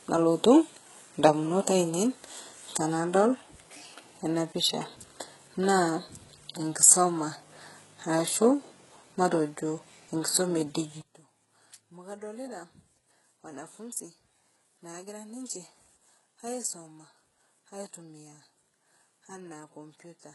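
All the way through, the speech has a gritty, metallic top end that stops dead around 11.5 kHz, likely from HE-AAC compression at something like 12 kbps. From 11.01 s to the end, the level drops by about 17 dB, likely because one channel is inverted and cancels in the mono sum.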